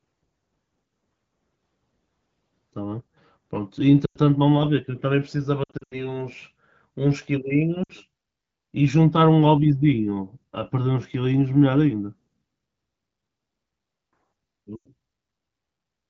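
Brief warbles and dips that drop quickly to near silence break the speech at 4.05–4.18 s, 5.63–6.21 s (scattered gaps, the longest about 80 ms), 7.84–7.92 s and 14.75–14.88 s. These are lost AMR speech frames: corrupted frames were concealed by repeating the last good pitch and vocal tract settings at decaying gain. Around them, the wideband codec sounds clean, which fits AMR-WB at roughly 12.65 kbit/s.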